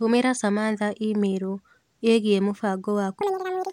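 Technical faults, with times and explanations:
3.21–3.73 s, audio read two samples at a time (double speed): sample pairs were taken as single frames, so the speech runs twice as fast, an octave up.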